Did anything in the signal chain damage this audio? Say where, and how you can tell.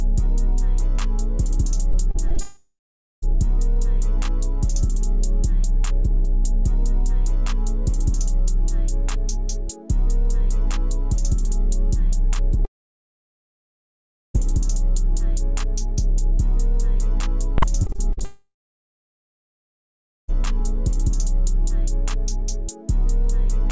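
Yes. The network stage shows repeated packet loss (robotic sound) from 1.92 to 2.39 s and from 17.83 to 18.23 s. The first burst has four short gaps of up to 30 ms. The second has six, up to 45 ms, and about a third of that span is patched. Each hole is filled by stretching the last fragment, so the sound turns choppy. On a spectrogram this shows as repeated, smeared vertical slices. The waveform shows copied cycles.

Three long network dropouts follow, at 2.40 to 3.24 s, 12.65 to 14.36 s and 18.24 to 20.30 s. They last about 0.8, 1.7 and 2.0 s. The first and last come straight after the loss bursts. Each starts with a decaying buzz as the receiver keeps extending the last sound, then goes silent. The silence lasts roughly 0.4, 1.7 and 1.7 s. The likely cause is no packets arriving at all. On a spectrogram each appears as a fading tail and then an empty band up to the G.722 ceiling at 8 kHz.

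Invalid numbers at full scale hit at 17.58 to 17.62 s, a block of about 43 ms that fits a 2048-sample processing block. This is a sample-format or processing fault. An infinite or invalid value was clamped to the largest sample value, so the output is pinned flat at one extreme value, far beyond the audio's peaks, for the block. It is heard as a loud crack. The waveform shows a solid rectangle far from zero, and the spectrogram shows bright broadband lines at its edges.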